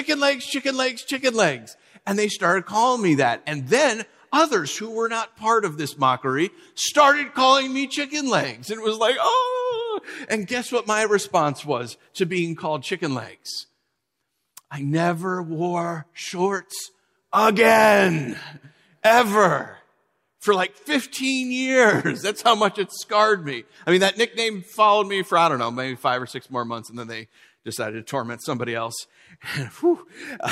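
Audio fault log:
No audible faults detected.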